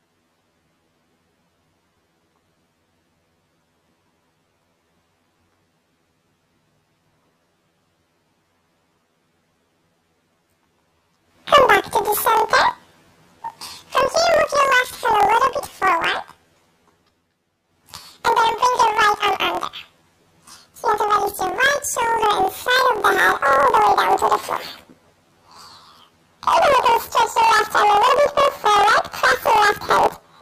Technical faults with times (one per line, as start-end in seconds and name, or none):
0.00-30.42 planar audio read as interleaved